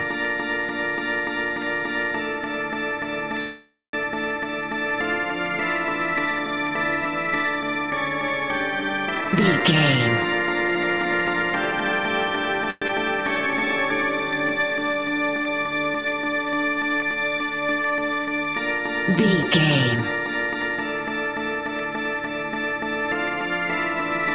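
Audio carried over a narrowband call link, with nothing above 4 kHz on the spectrogram, which fits a G.711 A-law codec at 64 kbps, shows four kinds of jitter-buffer and network fault. From 3.40 to 3.95 s there is a call audio freeze, likely caused by packets stalling in transit while the jitter buffer ran dry. The receiver stretches the last sound into a fading buzz for about half a second, including roughly 210 ms of near silence. Playback then resumes exactly where it stopped, so nothing is lost but everything after it is pushed about 0.53 s later. On a spectrogram the last frame smears into flat horizontal streaks that thin out into a blank band. The jitter buffer speed-up from 9.15 to 12.00 s runs at 118% speed and cuts roughly half a second of material by removing short pieces of one or a few pitch periods over and over. The result sounds hurried at unchanged pitch. The waveform looks compressed in time, while harmonic spacing stays the same. 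A milder speed-up at 106% from 19.11 to 20.77 s trims roughly a tenth of a second and sounds hurried. The long network dropout at 12.70–12.91 s is likely a burst of lost packets. About 185 ms of fading concealment covers it, with a 20 ms silent dip, and 80 ms of real audio never returns, so the sound jumps ahead when it comes back. This shows as a short smeared patch followed by an abrupt change in content. The jitter buffer slow-down from 13.35 to 13.77 s plays at 87% speed, repeating pitch cycles to add 62 ms. Sounds are drawn out at the same pitch, and the waveform shows near-identical repeated cycles.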